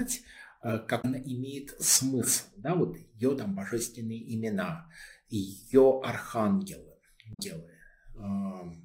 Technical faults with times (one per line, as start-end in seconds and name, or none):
0.98-1.05 damaged data in a compressed stream
7.30-7.40 damaged data in a compressed stream